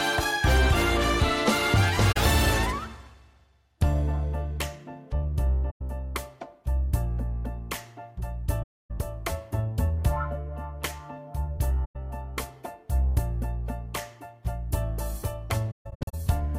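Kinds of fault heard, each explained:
AAC frame loss with muting: compressed frames went missing and the decoder replaced each gap with silence, so the overlapping windows fade the sound out and back in instead of cutting it. Soft-edged holes open at 2.12, 5.70, 8.62, 11.84 and 15.70 s and last from 43 ms to 320 ms. The last one is broken up, spread over 430 ms with its longest stretch around 150 ms, so the sound stutters there.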